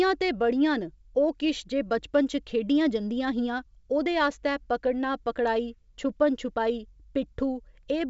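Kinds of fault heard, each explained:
No faults are audible: the speech carries the band limit of G.722 wideband telephone coding at 64 kbit/s, with nothing above about 7.7 kHz, which is how that coding normally sounds.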